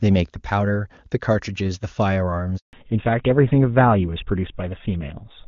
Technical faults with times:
2.57-2.73 handover gap
2.73-5.47 fallback to narrowband

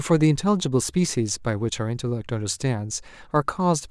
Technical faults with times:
3.36 hard clipping

